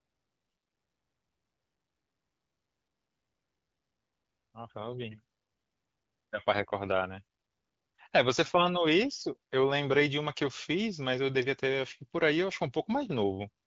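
No technical faults are present in this speech, which is carried by the AMR wideband (HD Voice) codec at 12.65 kbit/s, a rate at which that codec keeps speech clear.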